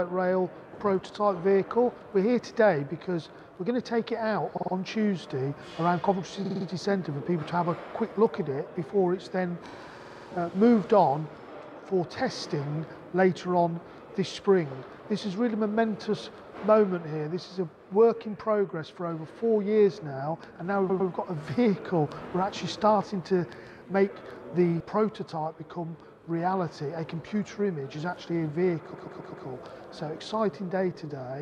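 Repeated frames occur at 4.56, 6.44 and 9.99 s, where a block of about 52 ms is replayed three, four and five times. They recur at 20.89 s, where a 104 ms block plays twice more, and at 28.93 s, where a 131 ms block repeats four times. Each event is a stuttering loop and stretches the timeline by 0.16 to 0.52 s.

Channel delay (comb filtering) spans 19.47 to 21.24 s. One channel lags by roughly a single sample, about 0.02 ms, and the mono sum cancels near 20 kHz, giving only a dulling of the extreme top end.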